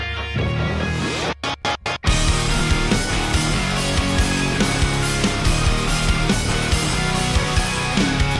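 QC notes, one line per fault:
No faults found.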